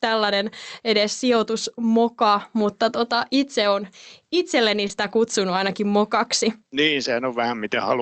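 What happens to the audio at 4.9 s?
Short concealed packet loss, 4.87–4.91 s, after "tota itse on itselleni": the decoder continued the previous sound, a brief smear.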